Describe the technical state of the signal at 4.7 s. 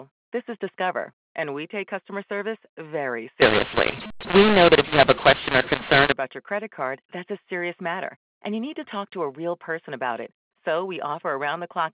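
At 4.7 s the speech is harsh and gritty, with levels jumping unnaturally and the gaps between syllables filled with hiss rather than silence. This is a mu-law and A-law mix-up, running from 3.42 s, after "take customer service very", to 6.12 s, before "about your credit card". The 8 kHz G.711 stream was encoded with mu-law but decoded as A-law, so each 8-bit code maps to the wrong level and near-silent samples are lifted well above the floor.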